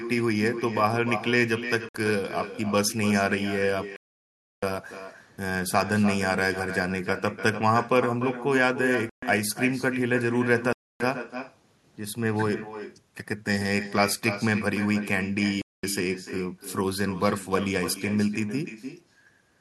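Echo with no canceller runs through the whole clip: every phrase returns roughly a third of a second later as a quieter, thinner copy about 10 dB down, as if the far end's loudspeaker is feeding its microphone and nothing strips that signal out.

Bluetooth stalls cut the speech to silence at 1.89 s (58 ms), 3.96 to 4.63 s (662 ms), 9.09 to 9.23 s (130 ms), 10.73 to 11.00 s (274 ms) and 15.62 to 15.84 s (217 ms), each dropout resuming abruptly, likely from interference starving the headphone buffer.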